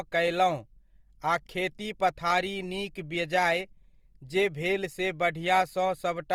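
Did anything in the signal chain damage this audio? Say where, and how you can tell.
Yes, at the codec stage: the speech carries Opus compression damage from start to finish, plainly audible as a rough, grainy texture rather than swirling. The cause is likely Opus in its music (CELT) mode at a low bitrate, in the region of 24 kbps. Bands short of bits are refilled with folded or noise content, so a spectrogram shows energy reaching about 20.2 kHz with few gaps, but harmonics look smeared into noisy patches instead of clean lines.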